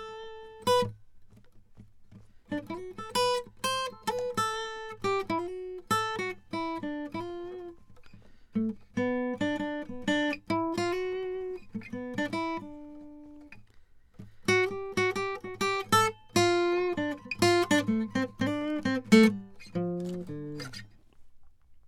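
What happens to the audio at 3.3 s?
Nothing goes wrong at 3.3 s; the music plays through that moment intact, with no audible fault.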